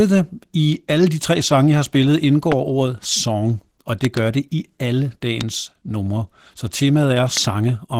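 Opus voice compression runs through the whole speech clip at 16 kbps in hybrid mode: a linear-prediction coder handles the band below 8 kHz and a transform layer covers the top, with nothing above 18.8 kHz. The coarse excitation coding at this rate makes the damage plainly audible, giving the speech a hoarse, slightly robotic edge.

Loud pops occur at 2.52 to 2.54 s, at 4.05 to 4.19 s (two in quick succession), at 5.41 to 5.43 s and at 7.37 to 7.39 s. Each peaks roughly 15 dB above the speech, a sharp transient with the speech continuing beneath, most likely a voltage spike from a switch, connector or static discharge.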